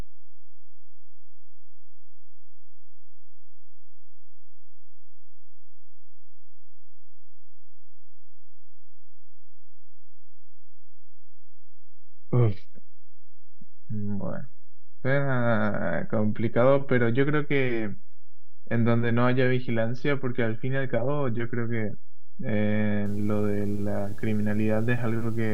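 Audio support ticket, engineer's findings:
DC offset present across the whole clip. Constant shift of about -23 dBFS. Not audible as such. Shows as steady energy at the very bottom of the spectrum and eats headroom. Probable component: a DC-coupled input stage or converter.

Video or display buzz from 23.06 s to the end at 25.53 s. Buzz at 75 Hz with hash above it, sitting roughly 20 dB under the speech. Screen or video cable coupling into the audio path at the display's field rate.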